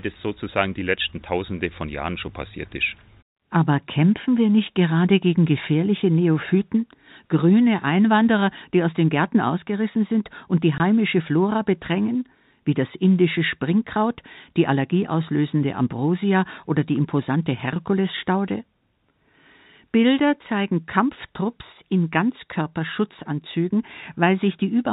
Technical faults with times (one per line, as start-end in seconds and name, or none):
10.78-10.80 packet loss filled with silence